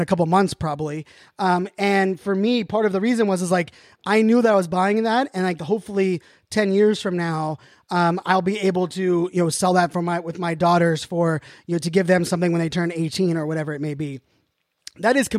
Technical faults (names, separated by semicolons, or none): none